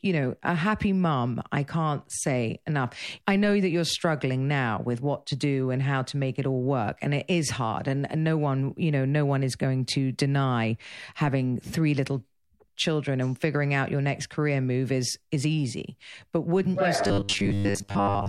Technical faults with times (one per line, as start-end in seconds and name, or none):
17.02-18.29 robotic sound from repeated short buffers